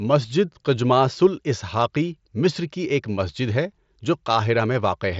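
No faults to report; the speech sits within a band that stops around 7.7 kHz, as expected from an mSBC wideband Bluetooth headset link.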